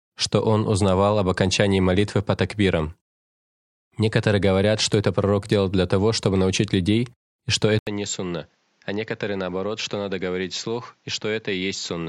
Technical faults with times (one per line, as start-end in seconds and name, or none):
7.79-12.09 input switched to a poorer device